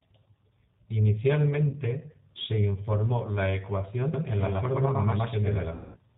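Throughout, the speech passes through a G.729 codec at 8 kbit/s, which models each 10 ms frame with a vocal tract filter, a pitch predictor and a handful of pulses instead of sending the waveform. Nothing above 4 kHz survives, so the sound is muffled and band-limited, and the pulse-based rebuilding gives it a plainly audible rough, synthetic edge.

From 1.69 to 1.78 s, there is VoIP packet loss concealed by the speech codec. Packets went missing and the decoder filled the gap by extending its last pitch and filter settings with falling gain. The result is a brief stretched, smeared sound just before "se informó la". The gap fits about 40 ms of lost audio, or four frames. The following syllables come back weak because each frame is predicted from the one before.

At 4.14 s a doubled audio track abruptly cuts in and runs to the end. A second full-band copy sits roughly a tenth of a second behind the first at about the same level, most likely because the signal was also picked up by a slower capture path. 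It gives a dry slapback with no room decay.

From 5.75 to 5.99 s, a longer packet loss hits inside that doubled stretch. About 190 ms of audio is missing, so the concealment stretches the last sound out and it fades toward silence. The sound returns distorted for a moment afterward while the decoder rebuilds its state.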